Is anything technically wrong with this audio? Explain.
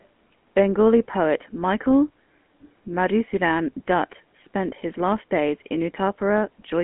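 Yes, two faults can be heard.

GSM full-rate codec coloring runs through the whole clip. This early mobile codec rebuilds speech from a vocal-tract model excited by sparse regular pulses, which gives the plainly audible buzzy, gravelly roughness. The line band of about 200 Hz to 3.4 kHz fits the 13 kbit/s full-rate codec. A spectrogram shows a hard ceiling, with nothing above 3.8 kHz.

An echo leak appears at 0.0 to 0.05 s. A very faint copy of the sound returns about 0.4 s (403 ms) later, far below the direct signal. The likely cause is a loudspeaker-side echo canceller letting a brief scrap through. On a waveform or spectrogram it is barely visible: a faint repeated trace offset by that delay.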